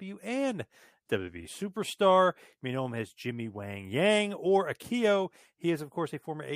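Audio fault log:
No audible faults detected.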